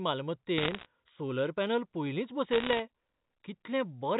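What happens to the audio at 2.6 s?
Bit errors on a digital phone line hit the speech from about 2.52 to 2.79 s, just after "सोलर पॅनल पयलींच". Flipped bits in the 8-bit logarithmic samples each corrupt a single sample, and when a high-order bit or the sign bit of a loud sample is struck the sample jumps far from its neighbours, producing a sharp tick. At an error rate of roughly 0.7 percent these ticks crowd together into a brief burst of crackle laid over speech that itself stays unchanged.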